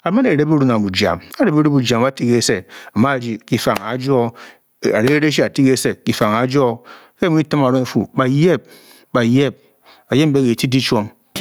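Gain pumping runs throughout: a likely too-hot input gain with a fast limiter yanks the level down around 10 dB on loud speech, so loud and soft parts end up closer in level and the sound is squashed.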